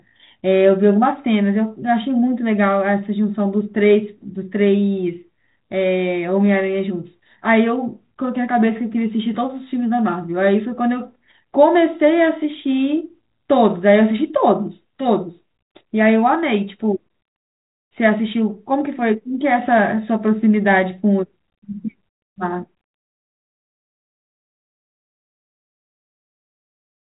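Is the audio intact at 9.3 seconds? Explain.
Yes, the audio is intact at 9.3 seconds, with nothing at that moment beyond the ordinary light G.726 ADPCM coding at 32 kbit/s, which keeps the speech band-limited below about 3.8 kHz.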